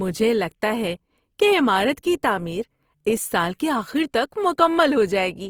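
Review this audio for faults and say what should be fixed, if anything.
Opus compression damage is plainly audible throughout the speech. It sounds grainy and rough. Starved bands are likely refilled with noise, fitting CELT mode near 24 kbps. Prevent this by encoding at a higher Opus bitrate or keeping a lossless master.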